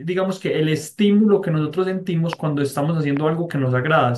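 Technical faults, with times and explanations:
2.33–2.35 s and 3.17–3.19 s, loud pop: two separate sharp pops, each lasting about 20 ms and peaking roughly 10 dB above the speech, which carries on unbroken beneath them. The likely cause is a brief voltage pulse, from a plug, switch, static discharge or driver glitch, entering the signal path. On the waveform each appears as a narrow spike standing well above the surrounding speech envelope. On a spectrogram each is a thin vertical stripe spanning the full frequency range.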